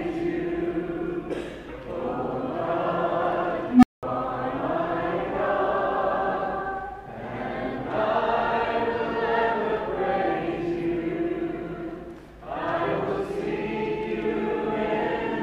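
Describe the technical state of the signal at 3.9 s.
That's right in the middle of an unstable filter event, running from 3.68 to 4.03 s. A recursive filter blows up, so a tone around 300 Hz swells over about 150 ms into clipping, then overflows and drops to roughly 200 ms of silence.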